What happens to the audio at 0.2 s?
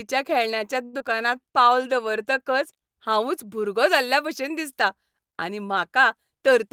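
Nothing goes wrong at 0.2 s; the speech is intact there, with no audible fault at that moment.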